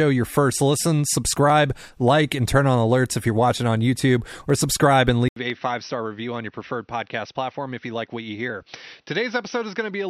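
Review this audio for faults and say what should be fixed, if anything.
At 5.28 s, right after "or subscribe and", the audio drops out for 80 ms and returns duller and roughly 10 dB quieter, with nothing above 6.1 kHz and a faint new noise floor until the end, likely an input switched to a poorer device. Lock the recording input to a single device and disable automatic switching before recording.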